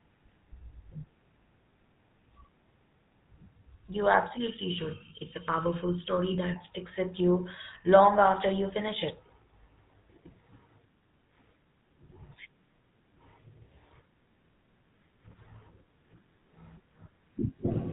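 Throughout, the speech carries the buzzy, gravelly roughness of the GSM full-rate codec, which fits its 13 kbps rate. The voice is rebuilt from a vocal-tract model driven by sparse regular pulses, so the excitation sounds coarse, and nothing above 4 kHz survives.

From 4.37 to 6.56 s, channel delay (comb filtering) makes the sound hollow and phasey. One channel lags by about 0.7 ms, and summing to mono cuts evenly spaced notches, the first around 700 Hz.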